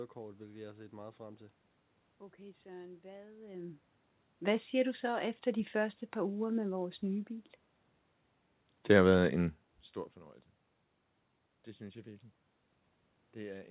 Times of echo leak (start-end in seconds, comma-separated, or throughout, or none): none